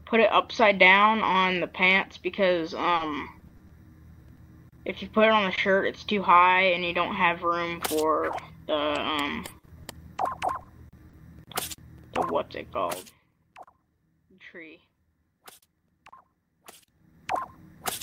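From 2.95 to 3.71 s the sound turns choppy and robotic: this is repeated packet loss. Five holes land close together, 120 ms of audio in all, the longest 40 ms, so about 16% of that stretch is concealment rather than real signal. Each hole is bridged by stretching the last sound, and the next one arrives before the audio has settled. That rapid clustering is what separates it from the isolated losses that follow.

At 4.35 to 4.39 s a single short concealed packet loss leaves a brief smear. About 20 ms never arrived, and the decoder extended the preceding sound before blending back into the real signal. The same happens again at 5.55 to 5.59 s. Each is one isolated wobble rather than a run, so the robotic quality of the earlier stretch is absent.

At 4.87 s and again at 4.91 s, and at 5.57 s inside the second concealed loss, there is no gap at all. These are lost packets rebuilt from error correction. 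A low-bitrate copy of each 20 ms frame travelled in the following packet and was played in place of the original. It sounds rougher and noisier for an instant, not smeared or missing.

From 8.15 to 11.15 s come scattered short gaps. There are roughly seven of them, with 140 ms missing and around 150 ms filled in, the longest about 40 ms. Error-correction copies also cover 280 ms of this span. Because the holes are spread out, the sound stays largely clear, with isolated ticks and hiccups instead of the sustained choppiness heard near 3 s.

Between 12.82 and 13.19 s a level drop of roughly 20 dB is applied in 2 dB steps, about twenty per second. Each step is abrupt, so a fine ticking rides on the sound while the level moves: zipper noise. That texture during the fall is the tell, not the fact that the level drops.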